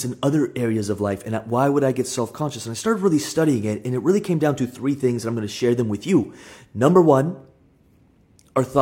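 No audible technical faults.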